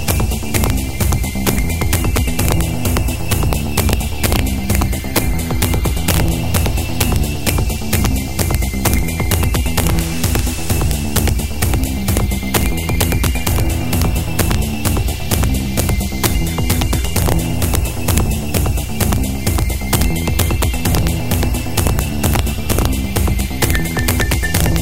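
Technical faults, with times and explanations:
Throughout, integer overflow: gain pushed peaks about 5 dB past the integer limit, so a small fraction of samples wrap to the opposite sign, giving violent cracks on loud sounds.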